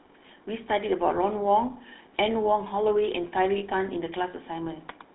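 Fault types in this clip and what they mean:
GSM full-rate codec: This is the original GSM mobile voice coder. It models the vocal tract and drives that model with a sparse train of regular pulses, so much of the fine detail is thrown away. The speech has a plainly audible buzzy, gravelly roughness throughout. The sound is confined to a narrow telephone band of about 250 Hz to 3.7 kHz, so it is thin and dull. The coarseness fits a 13 kbps full-rate stream.
lost GSM frames: When frames fail to arrive, the decoder repeats the settings of the last good frame rather than leaving a hole. Here this happens from 3.58 to 3.63 s, a gap of about 40 ms. The speech briefly freezes into a rough, metallic ringing before normal decoding resumes. The length fits two consecutive lost 20 ms frames. It is too short to fade fully to silence.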